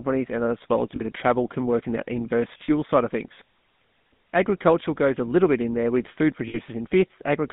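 From the very start the whole clip is squeezed through a GSM full-rate codec. The speech sits in a narrow line band of roughly 150 Hz to 3.7 kHz and has that plainly audible buzzy, gravelly grain, which fits the old 13 kbps full-rate coder's pulse-driven excitation.

Then there are three spots of lost GSM frames, at 0.96 to 1.03 s, 2.64 to 2.69 s and 6.48 to 6.58 s. At each one, the decoder keeps repeating the last good frame, so you hear a brief rough, metallic ring instead of speech. The gaps run about 40, 40 and 60 ms.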